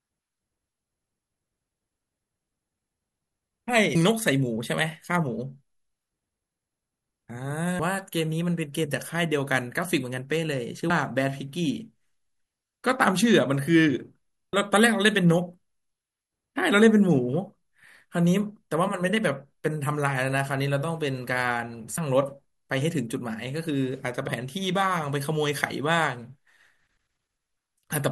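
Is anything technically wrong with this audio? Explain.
Yes. Compressed frames are skipped at 3.95, 7.79, 10.90, 14.53, 21.97 and 24.27 s. Whole 26.1 ms frames are lost, so the speech jumps ahead. Most jumps drop roughly 300 ms. At 10.90 s it drops about 100 ms, and at 21.97 s about 70 ms. Each join is a short smeared blip, not a click.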